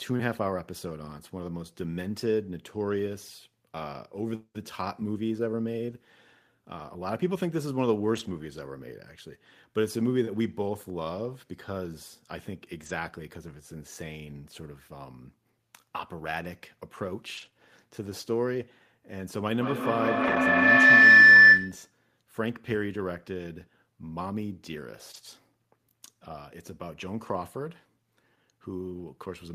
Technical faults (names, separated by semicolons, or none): lost packet rebuilt from error correction; short concealed packet loss; feedback howl